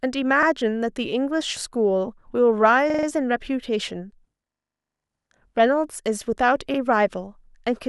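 Repeated buffer at 0.43, 2.90, 5.21 and 6.74 s: new data arrived late, so the device replayed its last 43 ms block of speech, which fits a 2048-sample buffer. Each repeat is a brief stutter with a hard join. At 2.90 s, the block sounds five times in a row, making a longer stammer.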